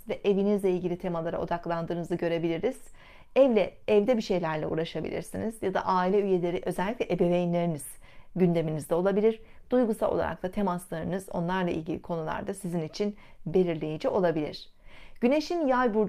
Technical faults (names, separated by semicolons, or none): none